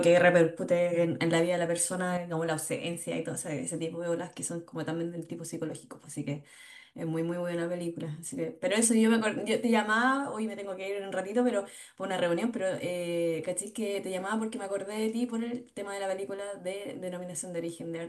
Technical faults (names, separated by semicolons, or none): one channel drops out